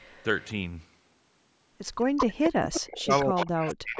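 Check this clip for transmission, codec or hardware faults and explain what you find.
Two faults from the call path are audible: a delayed echo of the speech recurring throughout, and the speech itself being pushed down near the end.

Echo leak at 0.00–0.24 s, 0.41–0.45 s, 2.00–2.26 s, 2.44–3.46 s, 3.67–3.75 s and 3.96 s to the end. The likely cause is a speakerphone whose echo canceller let its loudspeaker pickup back into the call. A copy trails the speech by 218 ms, ranging from faint to as loud as the speech around 2.0–3.5 s.

Speech suppressed in double talk from 2.80 s to the end. With echo and speech overlapping, the canceller apparently couldn't separate them and attenuated both. The speech dips and breaks up in pieces, dropping by around 40 dB at its deepest, over roughly a second in total.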